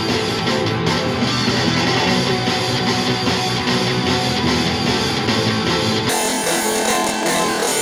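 From 6.09 s to the end at 7.82 s, the sound jumps up an octave, 12 semitones, and takes on a rapid flutter at about 21.5 Hz. This is planar audio read as interleaved: each block of about 46 ms, which fits a 2048-sample buffer, stores all left samples followed by all right samples, yet gets read as alternating pairs. Each block therefore plays twice at double speed, left then right, keeping overall timing intact.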